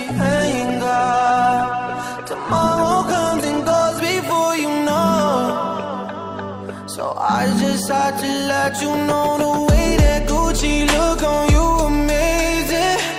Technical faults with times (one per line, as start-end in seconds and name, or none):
0.00-4.00 adaptive stream starting at a low bitrate